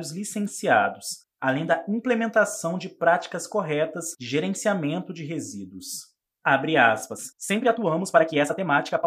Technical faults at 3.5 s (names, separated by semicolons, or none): none